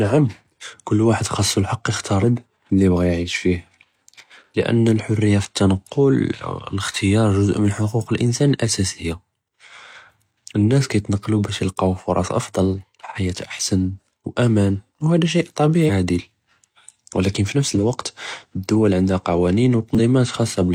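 A speech recording with three bursts of damaged data in a compressed stream: at 2.20–2.24 s, right after "ואחד חאס אלחק יכתאר", at 15.81–15.90 s, and at 19.95–20.00 s. Each is a brief glitch where the decoder misreads corrupted frames, loses sync and hunts for the next valid header. A spectrogram shows short vertical smears of broadband or oddly banded energy. The waveform shows an abrupt discontinuity there.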